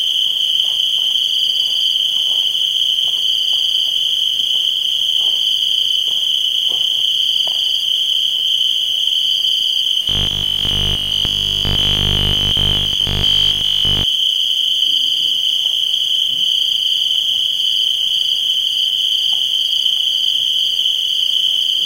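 From 10.03 to 14.05 s the sound turns into a rigid, metallic 50 Hz buzz: robotic sound from repeated short buffers, likely from audio arriving too late and a 20 ms buffer being looped over most of the passage. The spectrogram shows evenly spaced 50 Hz harmonics, and the waveform shows identical repeating cycles.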